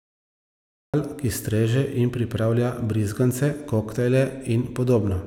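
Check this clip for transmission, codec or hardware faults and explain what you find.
There is one fault in this speech clip: a cut-off start. From 0.0 to 0.94 s the file holds digital silence, and at 0.94 s the speech appears abruptly, already in the middle of a sound, with no natural onset or fade-in. The capture or stream began late: whatever was being said before the recording engaged was never captured, so the first audible sound is truncated rather than building from its own attack.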